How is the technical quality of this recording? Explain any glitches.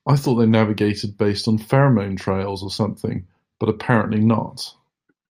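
No glitches are audible anywhere in the recording, and there is nothing technical to flag.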